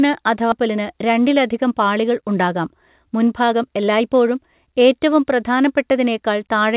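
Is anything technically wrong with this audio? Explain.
Yes, there are two faults in this speech clip.

At 0.52 s the speech lurches forward with no gap, as if a chunk were cut out and the two edges spliced. This is a skip ahead: roughly a second of audio was discarded, either lost in transit or dropped from an overflowing jitter buffer, while later audio was already queued.

From 0.67 s to 4.35 s the talker sounds rushed, about 9% faster, yet the pitch stays put. This is a jitter buffer speed-up. With too much audio held, the receiver shed about a third of a second by repeatedly removing tiny pitch-period-length slices.

The call path's G.711 mu-law coding, which fits a 64 kbps stream, adds its usual grain and leaves nothing above 4 kHz.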